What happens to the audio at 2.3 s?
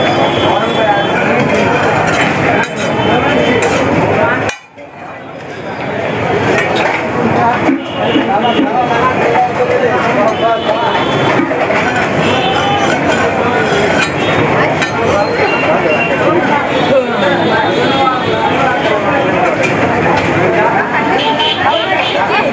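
At 2.3 s the sound is squashed, with loud and soft parts pulled closer together. This gain pumping runs throughout the clip, with swings of around 15 dB, likely from gain set far too high and a fast limiter pulling it down.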